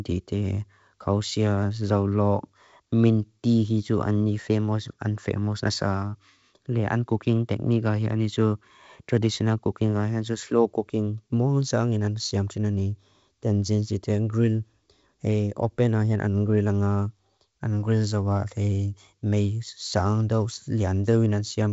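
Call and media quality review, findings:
No faults found.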